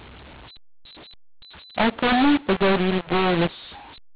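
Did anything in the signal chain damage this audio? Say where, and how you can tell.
Yes. At the codec stage, speech coded as mu-law is being decoded as A-law, a mu-law and A-law mix-up running the whole clip. Levels come out scrambled and harsh, and pauses fill with noise because the quietest codes land well above silence. The waveform shows jagged, uneven peaks and a raised floor between phrases, and the spectrogram shows broadband hash filling the gaps, all held under the 4 kHz ceiling of the 8 kHz telephone coding.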